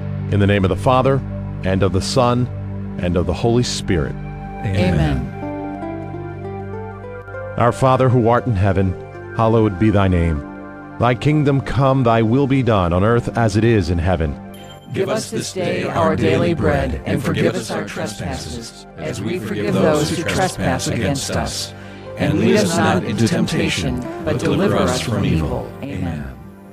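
The audio drops abruptly by about 6 dB four times: 7.22–7.28 s, 14.79–15.96 s, 17.51–19.68 s, and 25.85 s to the end. This is likely one channel dropping out. Material shared by both channels falls in level, and anything carried only in the lost channel vanishes.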